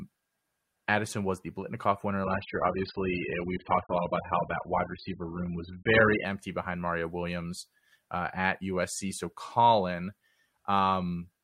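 From 2.24 to 6.24 s, an adaptive stream at a lower bitrate muffles the speech; the spectrogram abruptly loses everything above 5 kHz, without a gap.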